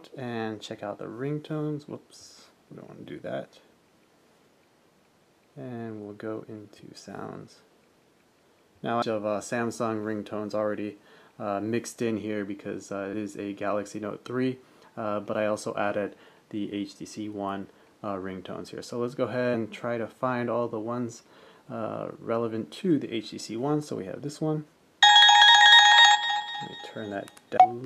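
Damaged data in a compressed stream at 9.01, 13.12 and 27.56 s breaks decoder frame sync, giving brief clicks, chirps or holes that show as thin vertical streaks or gaps.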